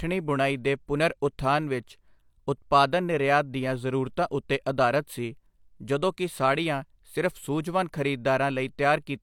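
A speech recording with no technical faults to report. Nothing in it points to a problem in how it was captured, processed or delivered.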